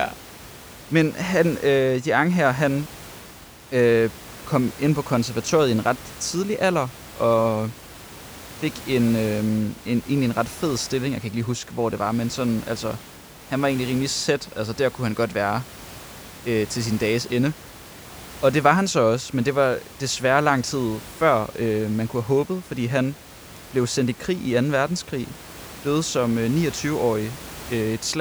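Nothing in the speech points to a technical fault; the only extra sound is the room's own background noise, sitting about 19 dB below the speech, which comes from the recording space rather than from the system.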